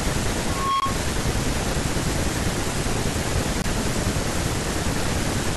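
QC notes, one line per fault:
0.47–1.04 s, loudspeaker feedback squeal: a 1.1 kHz tone swells over about a third of a second to roughly speech level. The microphone is re-amplifying its own loudspeaker at that frequency.
0.80–0.82 s and 3.62–3.64 s, block of digital silence: 20 ms of sound drops abruptly to silence and returns. This points to an output buffer not filled in time.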